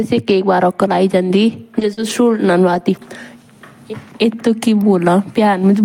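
Scattered short gaps from 1.79 to 3.03 s: about three lost packets, the longest around 40 ms, patched by extending prior speech, leaving brief ticks and smeared hiccups.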